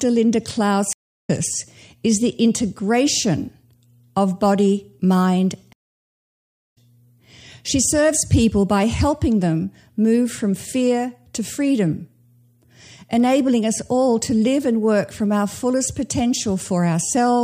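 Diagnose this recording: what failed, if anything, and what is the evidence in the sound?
The network connection dropped twice, and each time the player reconnected and restarted its decoder mid-stream: a stream reconnect. At 0.93 to 1.30 s, speech goes silent for 0.31 s and resumes roughly 0.4 s later. After "of body mind", 5.73 to 6.78 s is silent for 0.96 s and resumes roughly 0.7 s later, skipping speech.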